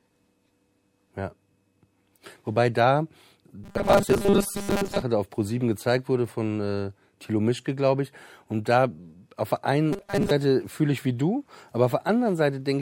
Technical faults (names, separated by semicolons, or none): robotic sound from repeated short buffers